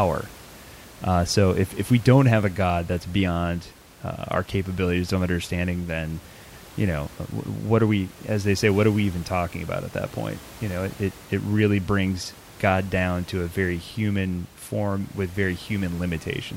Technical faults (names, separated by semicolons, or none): none